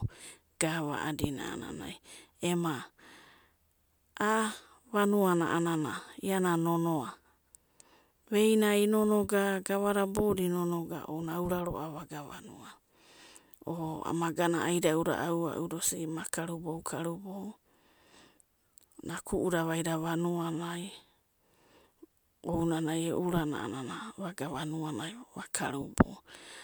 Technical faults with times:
none

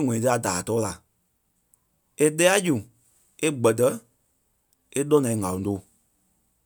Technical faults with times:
none

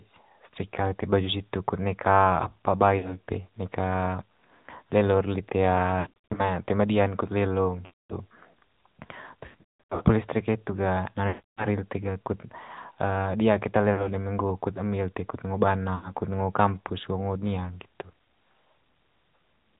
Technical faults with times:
0.00-19.79 AMR narrowband mobile codec
2.98-3.18 lost AMR speech frames
6.00-6.50 lost AMR speech frames
7.86-8.13 lost AMR speech frames
9.48-10.03 lost AMR speech frames
11.28-11.66 lost AMR speech frames
13.94-14.08 lost AMR speech frames
15.96-16.12 lost AMR speech frames

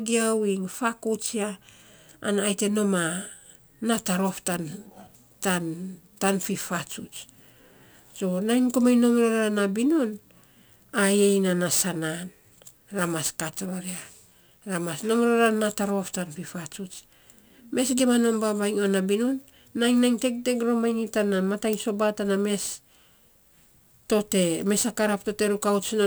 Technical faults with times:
3.92-26.07 crude rate conversion

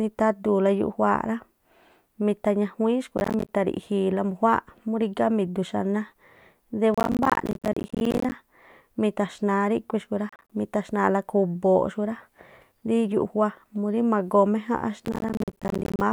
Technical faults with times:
3.18-3.49 processor overload crackle
6.94-8.34 processor overload crackle
10.29-10.52 processor overload crackle
15.05-16.01 processor overload crackle

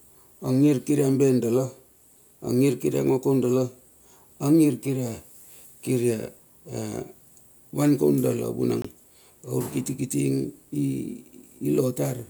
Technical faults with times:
8.82-8.87 corrupt frame decoded

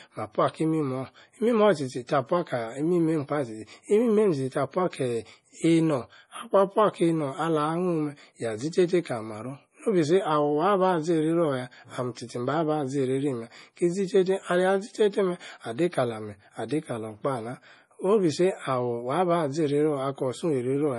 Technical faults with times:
0.00-20.98 MP3 compression

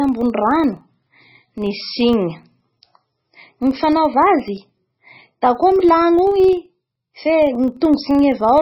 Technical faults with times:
0.00-8.61 MP3 compression
0.00-8.61 filter restarted on every block

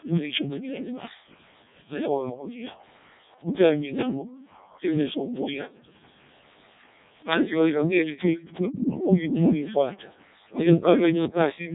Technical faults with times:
0.00-11.74 Codec 2 vocoder

